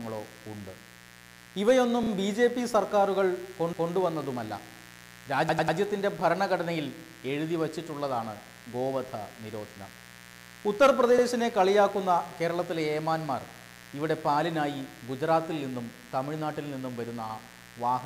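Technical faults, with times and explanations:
throughout: mains buzz, a steady raspy 60 Hz buzz roughly 20 dB below the sound, from sharp switching spikes whose harmonics reach into the kilohertz range.
2.03–2.10 s, 3.73–3.92 s, 5.49–5.78 s, 11.18–11.25 s: repeated frames. Blocks of 32, 192, 96 and 64 ms replay two, one, three and one extra times, causing stutters.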